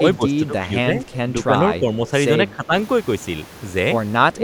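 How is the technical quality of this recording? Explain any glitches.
The speech has two recurring call-path faults.

Speech suppressed in double talk occurs from 0.0 to 0.91 s, 1.46 to 2.05 s, 2.41 to 2.73 s and 4.35 to 4.44 s. The echo canceller likely mistook the talker for loudspeaker echo while both sides spoke and attenuated everything. The voice dips by up to around 10 dB, and by less near 1.5 s.

Echo leak appears at 1.04 to 1.17 s and at 2.07 to 2.11 s. A far end playing the call over a loudspeaker likely failed to cancel its microphone pickup, so it returned brief, faint scraps of voice delayed by 222 ms, roughly 25 dB below the speech.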